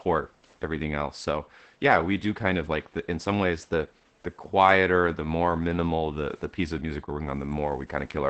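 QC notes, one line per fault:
Throughout: Opus voice compression. The speech sounds muffled, hoarse and a little robotic, which fits SILK mode at around 12 kbps. There is no energy above 8 kHz on the spectrogram, with smeared, coarse harmonics. The narrow bandwidth and crude excitation coding cause this.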